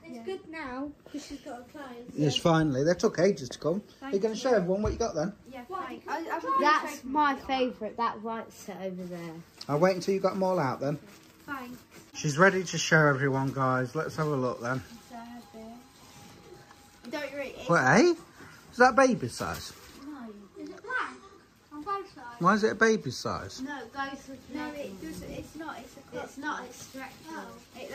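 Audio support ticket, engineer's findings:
Listened through the whole thing and nothing jumped out, so no faults to log on this one.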